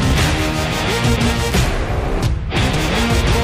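At 2.77 s, a brief blip marks damaged data in the compressed stream. Corrupted bytes made the decoder misread frames, lose sync and resume at the next header.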